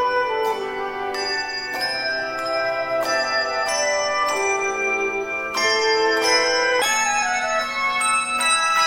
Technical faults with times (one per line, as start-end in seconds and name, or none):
6.82-8.87 section at the wrong speed